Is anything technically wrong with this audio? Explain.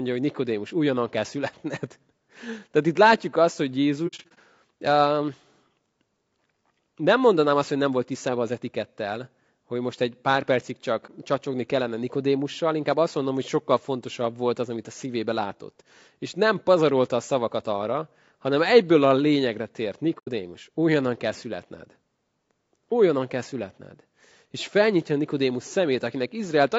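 Yes. Throughout, the speech sounds rough and grainy, with noise between harmonics and a dulled top band, likely low-delay AAC compression (AAC-ELD) at a bitrate around 32 kbps, whose short frames resolve pitch poorly.

AAC frame loss with muting makes soft-edged dropouts. The decoder zeroed the missing frames, and the overlapping windows faded the sound out and back in. The first comes after "látjuk azt hogy" at 4.07–4.38 s, with about 180 ms lost in scattered gaps up to roughly 70 ms. The second is a brief hole of about 30 ms at 11.06–11.10 s, between "most egy pár percig" and "csacsogni kellene". The third removes about 90 ms at 20.18–20.29 s, between "egyből a lényegre tért" and "újonnan kell születned".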